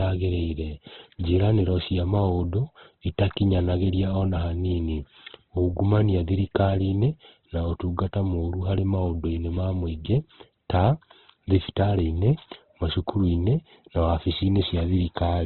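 Throughout, the speech sounds muffled and grainy, likely from heavy Opus compression; a spectrogram shows a flat ceiling at 4.2 kHz and noisy, smeared bands beneath.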